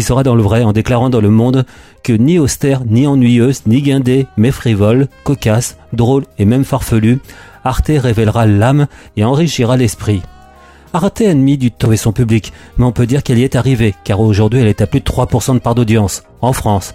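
A CD skip occurs at 11.85 s. A jolt or a surface flaw knocked the player's laser off its track onto another turn of the disc's spiral. Output drops out for only about 5 ms, heard as a brief tick, and the sound resumes from a different point in the recording rather than where it left off. The continuity breaks abruptly, as if a small stretch of audio had been spliced out or repeated.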